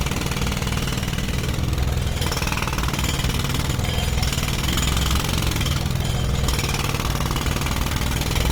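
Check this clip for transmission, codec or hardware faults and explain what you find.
One codec fault runs through the whole clip. Opus compression, likely in its music mode at around 24 kbps: bands are filled with noise rather than dropped, so sound turns grainy and rough, not swirly like MP3, and the top still reaches about 20.2 kHz.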